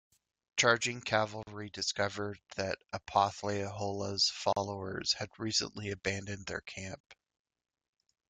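Gaps at joins of encoded pieces occur at 1.43–1.47 s (42 ms), 4.53–4.56 s (37 ms) and 7.00–7.04 s (35 ms): separately encoded segments keep their start delay and end padding, so speech cuts to brief silence with slightly smeared edges, then resumes where it stopped.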